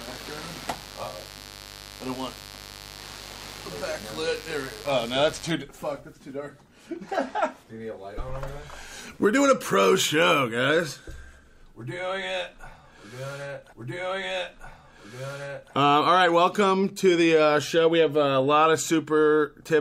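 Mains buzz runs from the start to 5.52 s, a steady raspy layer roughly 20 dB under the sound, built on 50 Hz. Sharp switching spikes, twice per mains cycle, leak in through a dimmer, rectifier or unshielded path, spraying harmonics up into the kilohertz range. A stream segment repeated from 13.72 to 15.72 s: the player fetched or queued the same chunk twice, so about 2.0 s of audio plays again, with a small blip where it jumps back.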